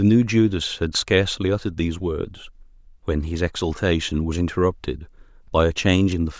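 No technical faults can be heard anywhere in this speech recording. There is no point in the timeline that calls for comment.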